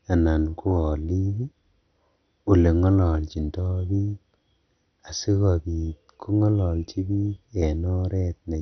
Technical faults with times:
0.00-8.62 MP2 compression

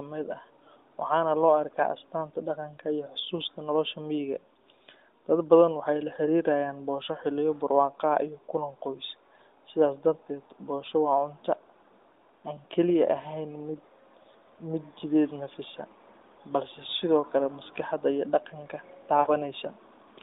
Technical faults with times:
19.20-19.31 lost AMR speech frames

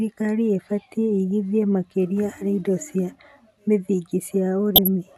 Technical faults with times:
1.30-1.42 DAB burbling
4.76-4.88 DAB burbling

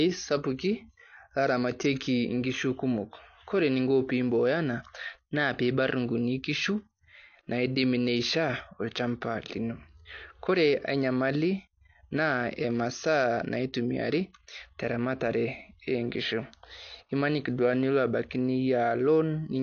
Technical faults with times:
0.00-19.62 AAC compression

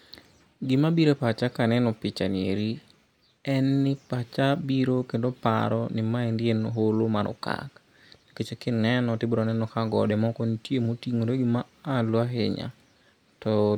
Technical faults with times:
none

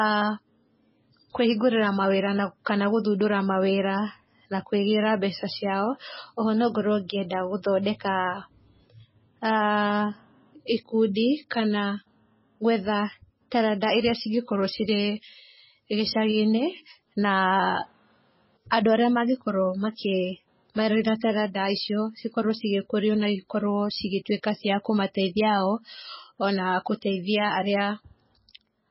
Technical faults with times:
0.00-28.90 MP3 compression

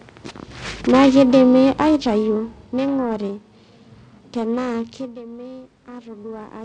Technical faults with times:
0.00-6.64 periodic clock jitter
0.87-3.14 automatic gain falling
4.71-6.60 automatic gain rising

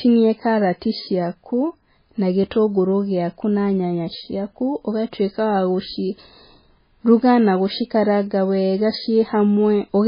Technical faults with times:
0.00-10.07 MP3 compression

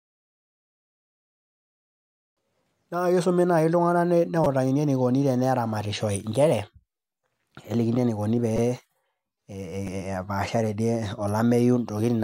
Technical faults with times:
4.44 repeated buffer
8.57 repeated buffer
9.87 repeated buffer

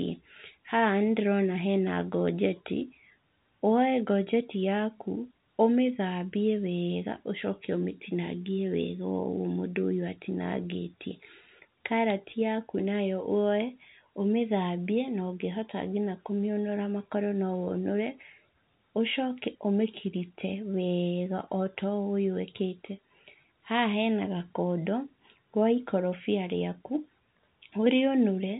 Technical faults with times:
none

